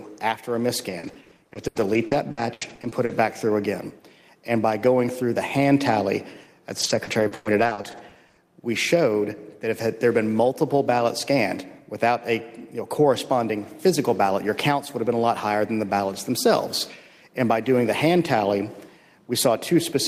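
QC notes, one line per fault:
0.89–3.11 s, repeated packet loss (robotic sound): choppy stutter with small pieces of sound missing. A rapid string of dropouts, the longest 80 ms, was each patched by stretching the preceding sound, so about 27% of this stretch is filled-in rather than real audio.
6.79–8.39 s, repeated packet loss (robotic sound): the same choppy texture returns, with holes up to 100 ms. Each lost or late packet was covered by repeating the last sound, which concealed about 24% of the span and left audible gaps.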